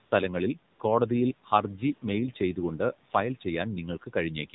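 Throughout, the speech sounds buzzy and synthetic with nothing above 4 kHz, which is AMR narrowband mobile codec damage, fitting a low bitrate mode of about 7.4 kbps. From 0.06 to 0.12 s, and again from 0.74 to 0.80 s just before "കോടതിയിൽ ഹർജി മെയിൽ ചെയ്തുകൊണ്ട്", smooth steady noise switches in for 60 ms each time. This is AMR comfort noise, where speech frames stopped and the receiver filled the gap with synthetic noise.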